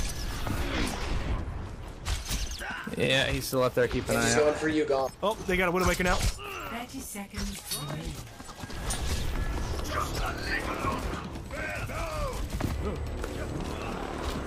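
A steady, thin, high-pitched whine at 8 kHz enters at 11.44 s and holds to the end, sitting roughly 30 dB below the audio. This is USB whine: current drawn in 125-microsecond microframes leaking through power or ground.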